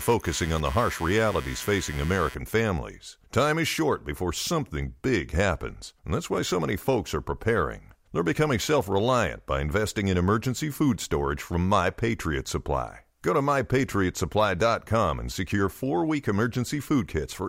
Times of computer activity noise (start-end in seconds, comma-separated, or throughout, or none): 0.00-2.35